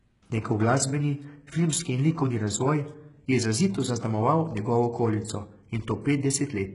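From start to finish the speech carries heavy HE-AAC compression, likely at a bitrate around 12 kbps. Upper frequencies are synthesised by copying lower bands upward, so sibilants sound gritty and lispy. A spectrogram shows blocky, repeated treble texture and nothing above 11.1 kHz.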